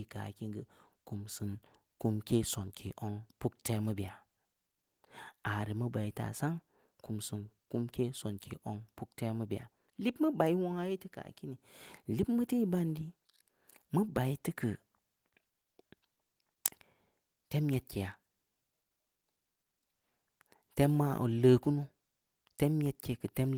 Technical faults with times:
none

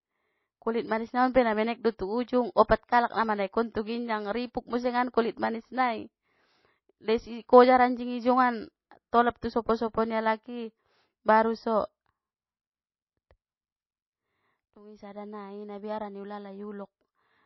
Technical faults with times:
0.00-17.46 MP3 compression

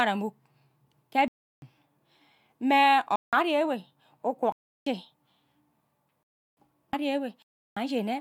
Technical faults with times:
1.28-1.62 block of digital silence
3.16-3.33 block of digital silence
4.52-4.86 block of digital silence
6.23-6.57 block of digital silence
7.42-7.77 block of digital silence

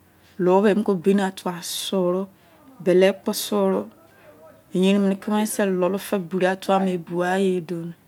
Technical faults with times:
none

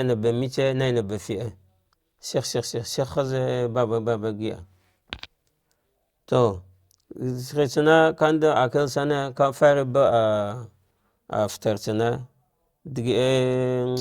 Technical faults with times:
none

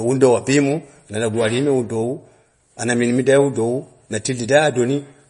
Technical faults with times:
0.00-5.30 MP3 compression

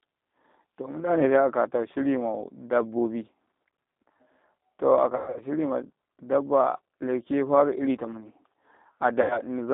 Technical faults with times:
0.00-9.73 G.729 codec
5.16-5.42 VoIP packet loss concealed by the speech codec
9.22-9.40 VoIP packet loss concealed by the speech codec

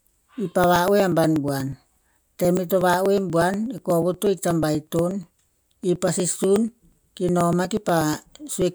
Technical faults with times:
0.15-8.62 periodic USB or driver dropouts

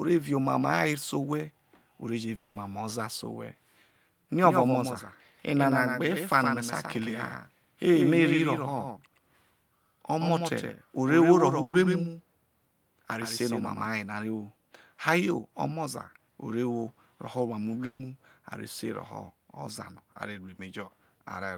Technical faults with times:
2.35-2.57 long network dropout
4.44-13.86 doubled audio track
11.61-11.75 burst of packet loss
17.85-18.01 burst of packet loss

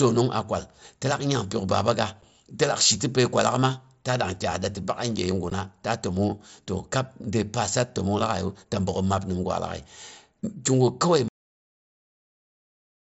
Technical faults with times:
2.22 unconcealed Bluetooth headset packet loss
5.50 unconcealed Bluetooth headset packet loss
11.28-13.02 cut-off end

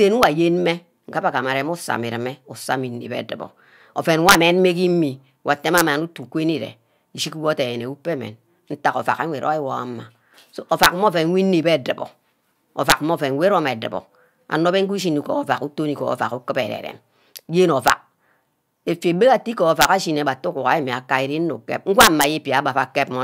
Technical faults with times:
0.23 integer overflow
4.29-4.35 integer overflow
5.78-5.81 integer overflow
10.83-10.86 integer overflow
12.90-12.92 integer overflow
17.88-17.90 integer overflow
19.81-19.85 integer overflow
22.01-22.24 integer overflow

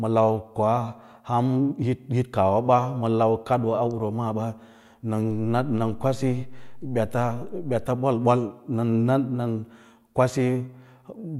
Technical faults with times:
5.31-7.86 DC step

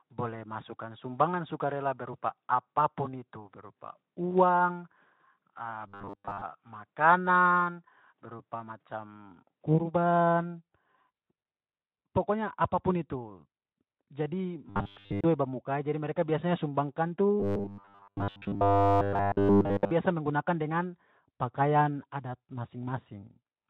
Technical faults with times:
5.87-6.42 robotic sound from repeated short buffers
14.70-15.24 robotic sound from repeated short buffers
17.40-19.91 robotic sound from repeated short buffers

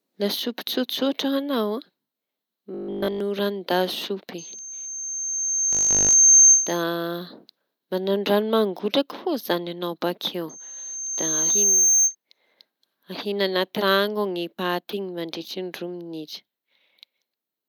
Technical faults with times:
2.74-3.20 robotic sound from repeated short buffers
4.38-6.83 loudspeaker feedback squeal
5.73-6.15 robotic sound from repeated short buffers
10.49-12.15 loudspeaker feedback squeal

